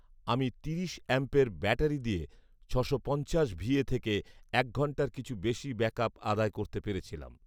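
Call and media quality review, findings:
No audible faults found: level, continuity and timing stay steady across the whole speech recording, with nothing in the signal path calling for a ticket.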